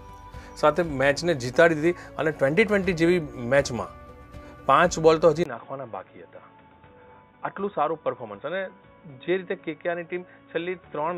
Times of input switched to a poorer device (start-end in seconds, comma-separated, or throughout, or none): 5.43-11.17